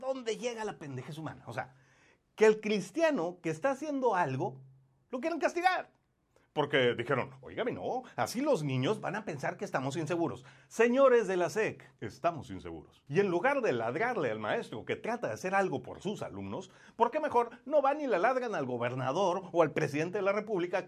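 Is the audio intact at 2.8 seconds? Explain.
Yes, the audio at 2.8 seconds is intact, with no audible dropout, glitch, or other fault at that moment.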